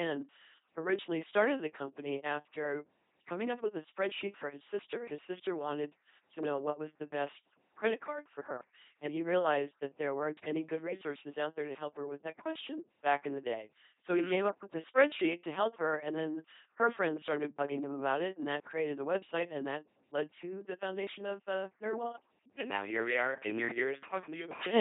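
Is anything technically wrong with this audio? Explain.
Yes. Throughout the speech, the voice has a buzzy, mechanical, robotic quality, with nothing above about 3.8 kHz. This is LPC-10 vocoder damage, consistent with a 2.4 kbit/s coder. Each moment is rebuilt from a pulse train or noise exciting a simple ten-pole filter, so natural vocal detail is lost.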